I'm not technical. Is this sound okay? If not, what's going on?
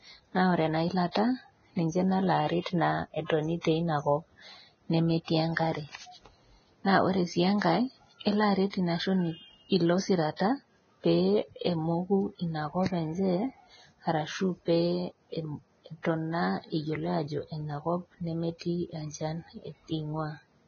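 No. The speech was most likely squeezed hard by Vorbis compression, which saves space by throwing away detail. Nothing above about 6.5 kHz survives, so the voice sounds dull and muffled, with a grainy, hissy roughness running through the whole clip.

That same compression also causes pre-echo. The codec spreads its noise across short chunks of time, so a short hiss appears just before sharp sounds. You can hear it at 1.11, 3.61 and 8.70 seconds, each time for about 40 milliseconds, which softens those attacks.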